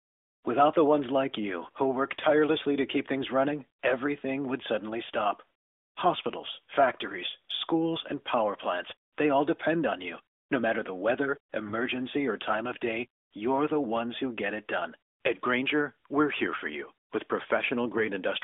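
At 11.66 to 11.73 s, after "matter the weather" and before "or time of day", AMR bit errors strike. The span fits about three 20 ms frames. Roughly one bit in twenty flips unchecked, misplacing pulses. Pitch holds, but the sound turns hoarse and gargly.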